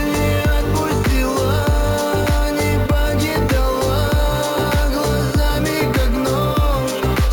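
There's imaging from sample-and-hold upsampling throughout: a metallic fizz sitting about 21 dB under the sound, tracking its level, with the first mirrored copy folded into the 8 to 16 kHz band. That points to 16 kHz material held sample by sample up to 44.1 kHz without smoothing.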